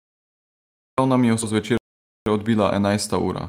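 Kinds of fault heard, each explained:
Cut-off start: The recording began late. The first 0.98 s is digital silence. The speech then enters abruptly on "nam je v", already mid-sound. There is no natural onset or fade-in, so the opening is chopped rather than a proper start.
Skip ahead: Right after "nam je v", playback jumps forward between 1.41 and 1.43 s. Around 0.4 s of speech is gone, with no filler. The two sides are joined almost directly, so the flow lurches instead of pausing.
Jitter buffer speed-up: From 1.51 s to the end, the receiver trims short pitch-period slices to shrink its backlog. It removes about 0.15 s in total. The speech runs at 108 % speed with unchanged pitch, so it sounds slightly hurried.
Playback stall: From 1.77 to 2.26 s the output drops to silence for 0.49 s, cutting off the speech mid-flow. The sound then resumes. The likely cause is the player running out of buffered data or its output thread being blocked.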